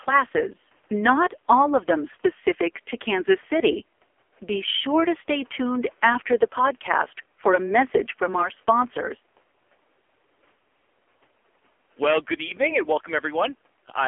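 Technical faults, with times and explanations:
Throughout, AMR narrowband mobile codec: buzzy, synthetic speech held within 250 Hz to 3.5 kHz, as a sparse vocal-tract model strains, which fits a 5.9 kbps mode.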